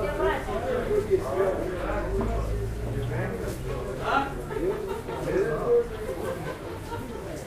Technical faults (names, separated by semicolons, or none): none